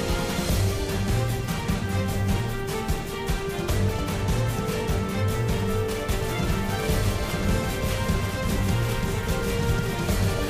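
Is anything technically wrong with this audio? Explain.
Yes. From 6.21 s to the end, the sound has a doubled audio track: a second full-band copy runs about a second behind the original, roughly 5 dB quieter. This likely comes from the signal being captured a second time through a slower path. Unlike an echo or room reverb, the copy has no decay and no room colouring. It cuts in abruptly at 6.21 s at a fixed lag, so the delayed material sounds like a clean repeat.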